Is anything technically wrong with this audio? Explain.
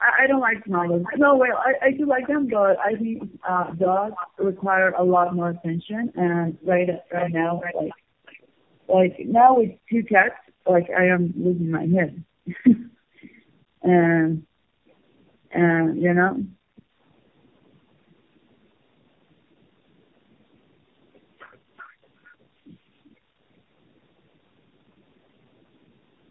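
Yes. Tandem speech coding runs throughout the speech. The sound points to several low-rate coders in series, such as AMR-NB, each re-encoding the last one's decoded output. The damage compounds into rough, muffled, warbly speech. A spectrogram shows nothing above 3.2 kHz and smeared harmonics.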